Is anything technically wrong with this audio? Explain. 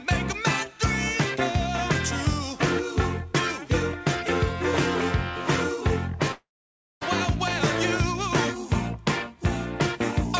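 Yes. From 6.32 to 7.03 s there is what sounds like a long network dropout. The last sound is stretched into a fading buzz, then about 0.57 s of near silence, and the audio resumes with roughly 0.7 s of material simply gone. That likely means packets stopped arriving and the receiver concealed the gap. A brief packet-loss glitch is patched in tens of milliseconds, and a plain edit or mute has no decaying tail and loses nothing. Throughout, nothing is heard above 8 kHz, which fits a wideband call codec such as G.722.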